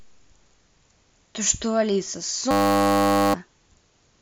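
From 2.51 to 3.34 s, the speech gives way to a system hang loop. The computer or driver stalled while the sound hardware kept replaying the same 10 ms piece of its ring buffer. That short loop repeats at 100 Hz, a steady, flat buzz. About 0.7 s of speech is lost.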